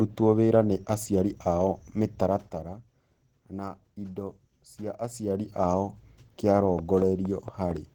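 From the start to the end, the speech carries plainly audible Opus compression, likely from a low-rate encode in the codec's hybrid speech mode. The voice sounds hoarse and muffled, with a grainy, rough texture. Energy still reaches about 20.2 kHz. The smeared graininess, rather than the watery swirl of MP3, points to Opus at around 16 kbps.

From 6.56 s to 7.72 s, a train of clicks sits over the sound. About seven near-identical pulses arrive at a steady 4.3 per second, peaking roughly 10 dB above the signal. The likely cause is interference or a faulty connection injecting pulses. The even spacing and uniform shape set it apart from random crackle or dropout gaps. The ticking stays on top of the speech rather than breaking it up.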